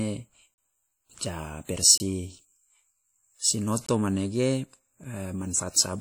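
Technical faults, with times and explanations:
Throughout: WMA compression, likely at a low bitrate near 48 kbps. Long transform blocks smear quantisation noise, giving ringing, washy speech with hiss that breathes.
0.54–0.58 s, 1.98–2.00 s, 3.86–3.88 s, 5.04 s: block of digital silence. The sound cuts out and back without fade, lasting 40, 24, 20 and 6 ms; the 6 ms gap is heard as a tick rather than silence.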